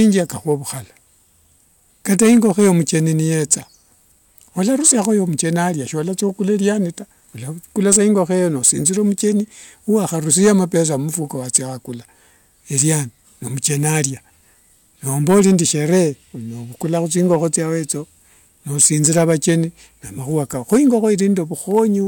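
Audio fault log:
Throughout, hard clipping: the speech was driven about 12 dB past what a stage in the chain could pass, so every peak that crossed the ceiling was sliced flat. Only around one percent of the samples go over, which keeps the damage to the loudest moments, where the squared-off tops spray harmonics high into the spectrum. The result is a brittle crackle and edge on the peaks rather than a constant fuzz.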